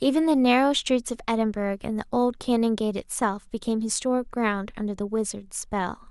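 A speech recording with no technical faults to report: the signal holds steady across its whole duration, with no audible breaks, level jumps or disturbances.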